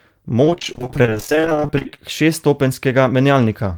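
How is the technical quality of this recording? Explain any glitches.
The recording is marred by repeated packet loss (robotic sound) from 0.44 to 1.99 s. Across that stretch, dozens of short holes, none longer than 32 ms, are patched by stretching out the preceding sound, so nearly half of that span is filler. The speech turns choppy, with pieces missing. Unlike plain dropouts, where the sound falls silent, these gaps are concealed by continuing the last sound rather than left as clean holes.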